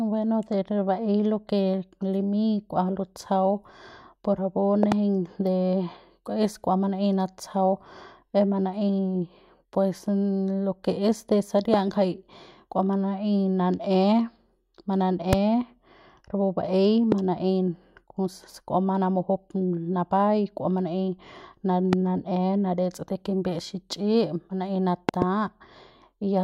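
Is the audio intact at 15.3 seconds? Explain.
No, there's a loud pop from 15.33 to 15.35 s, a single sharp click sitting roughly 20 dB above the speech, which carries on underneath it. It's likely a voltage spike from a plug, switch or static getting into the signal path.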